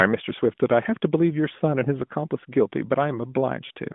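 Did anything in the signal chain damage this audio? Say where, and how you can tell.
Yes. The damage is in the network stage: lost AMR speech frames. From 3.66 to 3.71 s the narrowband speech smears and fades for about 40 ms, which fits two dropped 20 ms frames. The decoder repeated the last good parameters with falling gain.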